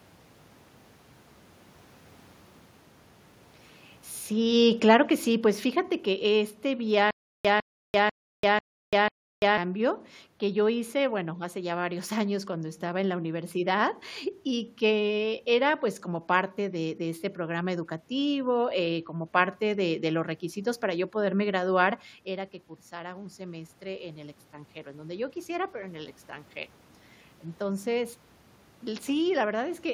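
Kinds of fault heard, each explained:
Automatic gain falling: The gain control decided the input was running hot and started easing itself down from about 4.3 s, sliding roughly 11 dB lower by about 10.8 s. You can hear the voice and the room noise sink together, which is how you tell it apart from the talker shifting position around 4 s. That natural change only affects the voice, not the background.
Stutter with silent gaps: Between about 7.11 s and 9.58 s the same 154 ms scrap of speech comes back five times, each followed by about 339 ms of dead digital silence, so it ticks along at a steady beat of roughly half a second. That's likely a stalled player or stream replaying its last fragment on each retry, and whatever speech should have filled that stretch is simply gone.
Automatic gain rising: From about 11.2 s right through to 29.8 s the gain control reverses course, deciding things are now too quiet and slowly winding up by about 9 dB. 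It's a long, gradual swell where voice and room noise climb together. The level shift around 22 s, where the talker moves relative to the mic, rides on top of this slow rise but is a separate, natural change.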